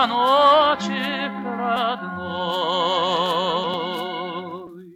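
At 1.76 s and again at 3.74 s the sound skips forward abruptly, each time losing roughly 30 ms. The two-second spacing points to audio likely missing between chunks during buffer handover. A spectrogram shows a hard vertical seam, and the waveform shows a discontinuous splice.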